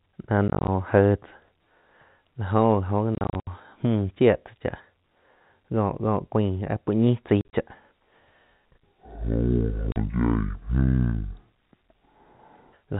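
It's a speech clip with two kinds of trouble. The first is packet loss filled with silence. The audio gets chopped by hard-edged holes at 0.48–0.68 s, 3.15–3.47 s, 7.41–7.53 s (right after "puo ñi chai") and 9.92–9.96 s. The gaps total roughly 110, 190, 80 and 40 ms, scattered in short runs up to 70 ms long, and they come in steps that fit 10 ms packets being dropped and replaced with silence. The second is a section at the wrong speed. From 8.66 s to 12.73 s everything plays at half speed, so it drags and drops about ten semitones, with pitch and tempo sliding together. That's likely the section being fitted to the wrong clock during editing or playback. Throughout, the G.711 A-law telephone band caps everything at 4 kHz, which is why it all sounds narrow.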